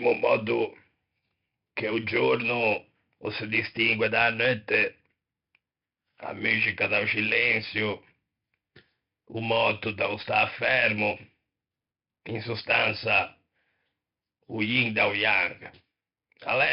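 Throughout the clip, the speech has passed through 4-bit ADPCM compression. Each sample was stored as a coarse 4-bit step from a prediction, with a step size that adapts only gradually. The sound points to a stream of about 44 kbps. Damage is heavy: a gritty hiss rides on every loud syllable and rises and falls with the level, and sharp onsets distort where the step size lags. Nothing is heard above 5.3 kHz, so the speech sounds dull.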